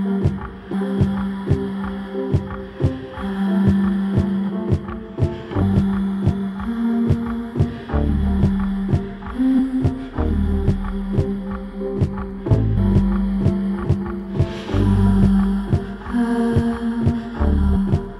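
Compressed frames are being skipped, with the audio jumping ahead at 0.72, 4.48, 5.61, 9.58, 12.76 and 13.83 s. Each jump drops roughly 0.3 to 0.5 s of material, which fits runs of 26.1 ms frames that went missing or were rejected by the decoder as damaged.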